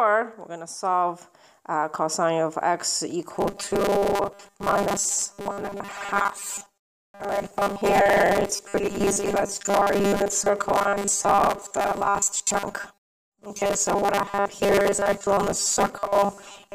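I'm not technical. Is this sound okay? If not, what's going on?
No. From 3.35 s to the end, the sound turns into a rigid, metallic buzz. This is robotic sound from repeated short buffers. New audio is likely arriving too slowly, so the playback fills the gaps by repeating the last tiny slice, about 5 ms long. Most of the time it is replaying these slices instead of the real audio. The constant repeats add a buzz at a fixed 200 Hz.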